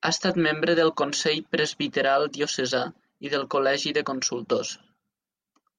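No technical faults are audible anywhere in this speech recording.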